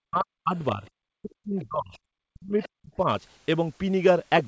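Speech that's been through a call, with the top end stopping around 8 kHz, which fits a wideband codec like G.722. The main trouble is speech suppressed in double talk. The voice gets pushed way down from 0.01 to 0.56 s, from 1.08 to 2.02 s and from 2.31 to 3.07 s, dropping by something like 40 dB at the deepest so chunks nearly vanish. There's also a milder dip of roughly 10 dB at 0.72 to 0.86 s. That pumping is likely the echo canceller hearing both sides at once, failing to tell the near talker from loudspeaker echo, and clamping everything. On top of that you get the other side's voice leaking through in two brief scraps, at 1.61 to 1.66 s and 2.62 to 2.69 s, sitting about 20 to 25 dB under the main speech. That's likely residual loudspeaker echo the canceller didn't fully strip from the mic.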